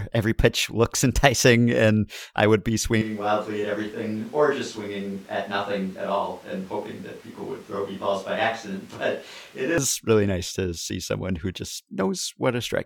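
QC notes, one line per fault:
3.02–9.78 s, switch to a distant microphone: after "and I would be" the speech abruptly turns roomy, thin and about 10 dB quieter with louder room noise, likely a far microphone, then snaps back before "really nice to see".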